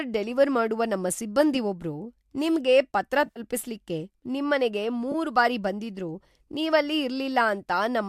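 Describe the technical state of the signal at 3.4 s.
Around 3.26 to 3.40 s there is AAC frame loss with concealment: about 80 ms of audio went missing across roughly 100 ms, the longest gap around 50 ms. The decoder patched these gaps from the last good spectrum, so they sound smeared and noisy rather than cutting to silence as a plain dropout would.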